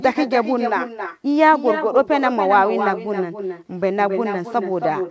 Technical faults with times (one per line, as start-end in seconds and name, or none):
0.00-5.11 echo with no canceller